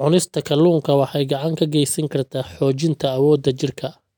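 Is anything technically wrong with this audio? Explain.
No, nothing technically wrong can be heard here.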